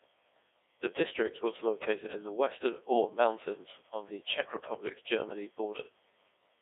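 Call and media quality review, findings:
Robotic, buzzy speech with a synthetic hollow tone across the whole clip; band limited to roughly 300 Hz to 3.6 kHz. Likely the Codec 2 vocoder, with heavy damage. No waveform is transmitted, only pitch, voicing, energy and a spectral envelope, which the decoder rebuilds from sine waves. The coarseness fits a 1.6 kbit/s mode.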